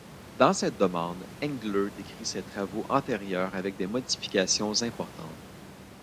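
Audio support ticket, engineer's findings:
Nothing stood out on listening; the room noise sits about 20 dB below the speech and is part of the recording.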